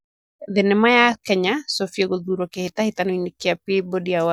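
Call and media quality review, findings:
No faults found in this speech clip. Nothing in the audio calls for a ticket entry.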